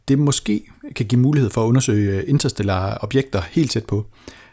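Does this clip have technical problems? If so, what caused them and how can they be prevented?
No, no technical faults here.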